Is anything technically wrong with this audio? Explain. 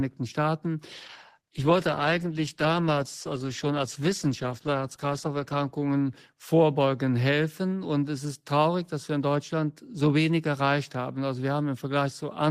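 Yes. A call bitrate drop occurs from 0.92 to 6.37 s, with the lowest quality lasting about 4.6 s. Bandwidth fell and the encoder coded coarsely, consistent with dropping from roughly 32 to 14 kbps. The sound turns rough and muffled, and the spectrogram shows the high frequencies cut off.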